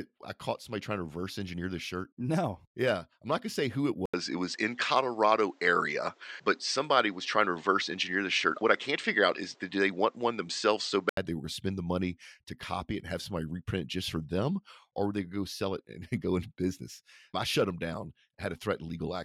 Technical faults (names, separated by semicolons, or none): input switched to a poorer device